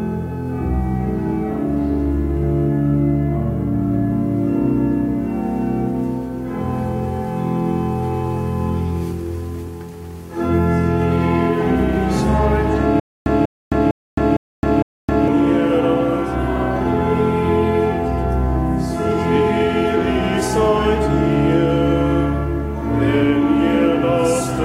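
From 13.00 s to 15.28 s the audio falls into a stutter with silent gaps. A 192 ms fragment plays, then about 265 ms of dead digital silence follows, and the same fragment returns five times at a steady 457 ms period. The likely cause is a stalled player or stream that replays its last buffered piece on each retry and then runs dry, so whatever sound belonged in that stretch never arrives.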